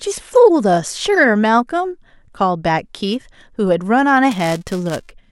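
From 4.31 to 5.11 s there's buffer tearing: a rattly, robotic buzz around 345 Hz riding on the speech, which fits a 128-sample buffer. Writer and hardware read pointers slipped, so a small sliver of each buffer replays audio a few milliseconds stale, with hard joins.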